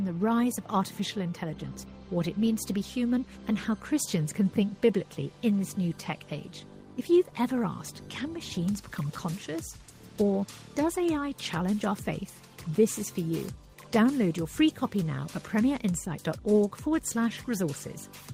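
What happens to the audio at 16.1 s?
Nothing goes wrong at 16.1 s, where the audio plays through intact with no audible fault.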